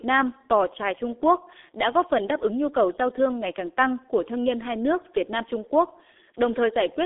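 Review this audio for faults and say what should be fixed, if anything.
From start to finish the speech sounds muffled, boxy and hoarse, with consonants smeared together and no brightness at all. That is the G.723.1 codec, heavily applied. The sound is confined to a narrow line band of about 250 Hz to 3.6 kHz, with nothing above 3.8 kHz. The rough, buzzy quality fits a very low bitrate of around 6.3 kbit/s. At that rate the codec updates its voice model only once per 30 ms frame, so rapid consonant detail is lost. To prevent this, record or route the audio through a wideband path and avoid low-bitrate telephony codecs such as G.723.1.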